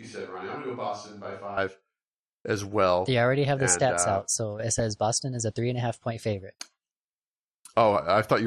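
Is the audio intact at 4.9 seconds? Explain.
No. From 4.79 to 4.90 s there is DAB burbling: bit errors slipping into the audio data make single sub-bands jump in level for up to a frame, giving a brief burbling distortion, unlike steady codec dullness. Throughout, MP2 compression is audible as muffled, gurgling granularity, likely from a rate around 80 kbps.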